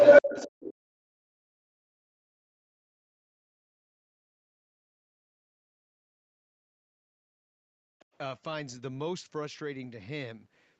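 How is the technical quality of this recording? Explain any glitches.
The quality is poor, with an echo and double-talk problem through most of the clip, heard over an Opus call path that stops at about 8 kHz.

Other side's voice leaking through, 0.0 to 0.74 s and 7.99 to 8.18 s: the echo canceller likely failed to remove the far end's loudspeaker sound from the microphone. The first stretch is much louder than the talker. The second is a faint scrap well below the speech.

Speech suppressed in double talk, 0.22 to 3.05 s, 3.63 to 7.28 s and 7.69 to 7.92 s: with both sides talking at once, the canceller likely turned everything down. The talker's speech dips sharply, by around 40 dB at worst.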